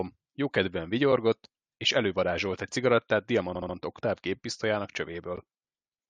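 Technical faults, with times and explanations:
3.54–3.75 s, repeated frames: a short slice of the speech, three frames of about 70 ms each, about 209 ms in all, is played again, which fits a run of compressed frames being sent more than once. The result is a stutter that stretches the audio by about 209 ms. Unlike a dropout or skip, nothing is lost. The same fragment returns once before the speech continues.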